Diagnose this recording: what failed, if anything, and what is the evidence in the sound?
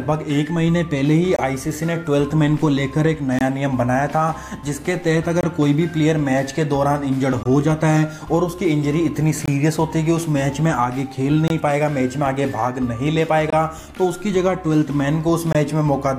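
Playback stage, a gap between chunks: 23 ms holes at 1.36, 3.39, 5.41, 7.43, 9.46, 11.48, 13.50 and 15.53 s, silence inserted between 2 s chunks.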